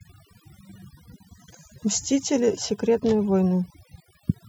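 A noise reduction stage was set far too aggressively on this speech recording, producing overdone noise removal that runs for the whole clip. Wherever a frequency band sits close to the processor's idea of the noise, it is pushed down hard or muted, and the softer parts of the speech are cut away with it. The background drops and breaks up into twinkling specks.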